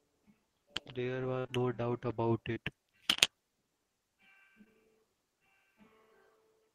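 A speech clip with dropouts typical of a lossy network link. A burst of packet loss at 1.39–1.47 s loses 60 ms: the last sound is stretched and faded for about 52 ms, showing on a spectrogram as smeared, decaying energy before the audio resumes. Short concealed packet loss follows immediately at 1.47–1.50 s and again at 2.54–2.58 s and 4.64–4.68 s, each losing 20 ms. These are patched with synthesized continuation, heard as brief smears or wobbles and visible on a spectrogram as small smeared patches.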